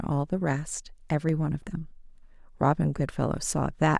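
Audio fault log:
1.29 s and 2.35 s: dropped samples. Each time the speech carries a single sharp click, seen as a thin vertical line running up the spectrum. The likely cause is a tiny gap in the sample stream, a fraction of a millisecond long, so the waveform leaps from one value straight to a later one. That gap is far too brief to remove any audible sound, but the abrupt step spreads energy across all frequencies, which is why it registers as a click.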